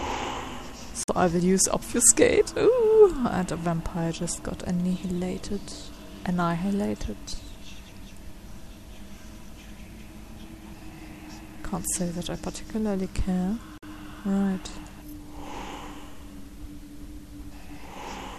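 Audio with two brief digital broadcast dropouts, at 1.03–1.09 s and 13.78–13.83 s. Each time the receiver mutes for roughly 50 ms, consistent with two corrupted frames, before sound resumes. The waveform flatlines and the spectrogram shows a full-height blank vertical gap.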